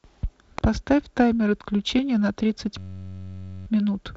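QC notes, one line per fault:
0.58 s, electrical switching spike: one sharp snap that lasts barely a millisecond and sits right on top of the speech rather than replacing any of it. It's a tight arc, likely from a switch, motor or static discharge near the cabling that got induced into the audio line.
2.78 to 3.67 s, system hang loop: for almost 0.9 s the speech stops moving and a 10.67 ms slice repeats back to back, around eighty times. At 93.8 Hz that comes across as a steady buzzy drone instead of a stutter, because the loop is so short. The length fits a 512-sample buffer being replayed while the host stalled. When it resumes, the speech seems to pick up about where it left off, with practically nothing skipped. The G.722 wideband coding underneath keeps its usual light hiss up top, and the band tops out near 7.7 kHz, with the coder running in its 48 kbit/s mode.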